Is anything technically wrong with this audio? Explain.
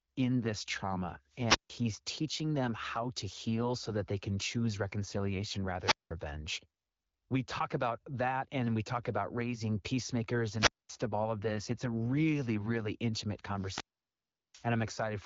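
Yes. Wireless microphone squelch dropout occurs at 1.30–1.89 s after "in this trauma", at 5.79–6.12 s after "they can choose reconciliation", at 10.55–10.91 s after "talk about raising peacemakers", and at 13.54–14.69 s. Each time the radio signal fades until the receiver's squelch cuts the output. A brief rise of hiss gives way to near silence lasting about 150, 190, 230 and 740 ms, and then the speech returns.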